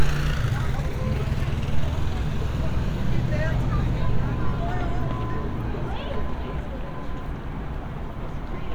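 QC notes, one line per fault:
Nothing stood out on listening.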